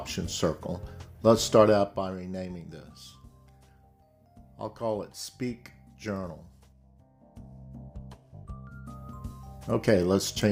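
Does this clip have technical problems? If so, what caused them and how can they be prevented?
Yes, there's zipper noise from 1.6 to 2.13 s as the level drops by roughly 10 dB, and again from 6.72 to 7.89 s as it climbs back about 10 dB. The gain moves in unsmoothed steps, around fifty a second, each leaving a small click. Ramping the gain per sample, or smoothing it, prevents it.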